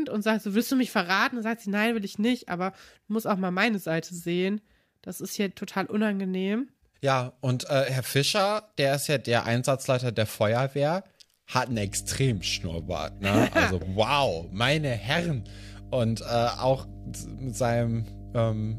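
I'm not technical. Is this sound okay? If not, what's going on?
No, not quite. From about 11.73 seconds right through to the end of the speech, there's mains hum: a steady, low buzzing drone sitting underneath everything. It's pitched at 50 Hz, the frequency of the electricity supply, and it's loud enough to notice without straining. It happens when the power line leaks into the audio, often through a ground loop between connected equipment or a transformer sitting too close to a cable.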